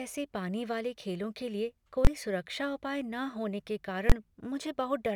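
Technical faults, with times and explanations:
2.05–2.07 s and 4.10–4.12 s, invalid numbers at full scale: a calculation produced invalid or infinite values that were clamped to the largest sample value for a whole processing block. Each block is about 21 ms long, which fits a 1024-sample block. Each event is a single very loud bang where the speech drops out. The first falls between "वाले खेलों के लिए" and "सुरक्षा उपाय", and the second comes just after "होने के".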